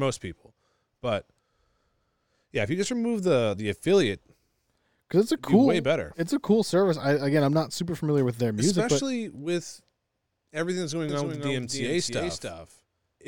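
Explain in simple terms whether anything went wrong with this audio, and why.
From 11.09 s to the end, the speech plays twice: a doubled audio track. A quieter copy trails about 0.3 s behind, likely from a second recording path. Unlike an echo, it starts abruptly and never fades.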